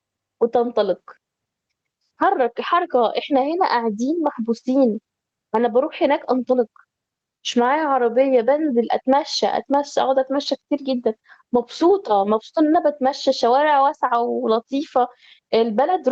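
From start to finish, the gain swings by around 10 dB, squashing the speech. This gain pumping likely comes from input gain set far too high, with a fast limiter clamping each peak. Beneath it sits the call codec's coding noise and a top end that stops near 8 kHz.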